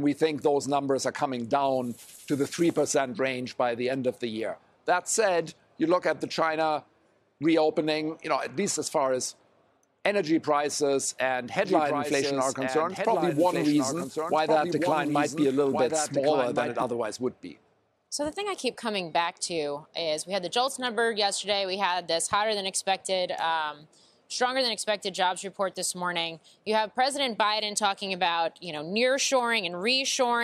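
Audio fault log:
11.6–16.8 s, doubled audio track: A second full-band copy of the sound trails about one and a half seconds behind. It sits a few decibels quieter. It has no decay or room colour. It starts and stops abruptly. The likely cause is a slower second capture path or an out-of-step edit.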